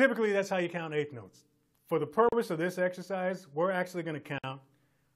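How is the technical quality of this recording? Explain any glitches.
The audio breaks twice with short silent gaps, at 2.29 s lasting about 37 ms and at 4.38 s lasting about 53 ms. Each time the sound drops out briefly, with softened edges, and then carries on from where it stopped. This is a gap at a join of encoded pieces: the audio was encoded in separate segments and joined untrimmed, so each encoder's start-up silence and final-frame padding stayed in at the seam.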